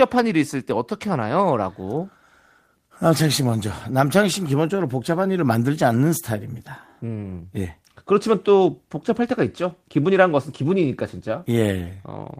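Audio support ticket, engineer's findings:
Nothing to flag on this speech clip; no audible faults came up anywhere in the recording.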